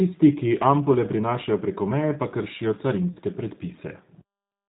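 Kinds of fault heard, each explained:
G.729 codec: The whole clip has the narrowband, rough, somewhat synthetic edge of a low-rate speech codec that rebuilds the voice from a vocal tract model and a few pulses per frame. Nothing gets above 4 kHz, and the damage is plainly audible, which fits G.729A at 8 kbit/s.
VoIP packet loss concealed by the speech codec: From about 3.13 to 3.19 s, roughly 30 ms goes missing, which fits a single lost packet. The decoder covers the gap by stretching its last pitch and filter into a fading buzzy tone or coloured noise, and the sound stays weak or distorted just afterwards.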